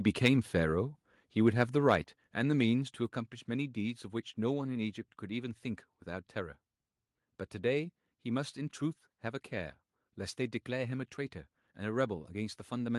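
At 0.25 to 0.28 s and again at 1.90 to 1.93 s, the loudest moments of the speech take on a harsh, crackling edge. This is microphone overload: peaks run about 4 dB and then about 2 dB past the converter's ceiling, flattening a few percent of samples, likely from input gain set too high.

At 2.04 s, just after that second distorted peak, voice and background both drop abruptly by about 4 dB. The microphone volume stepped down in a single move, likely because the call software detected clipping and cut the device's input level.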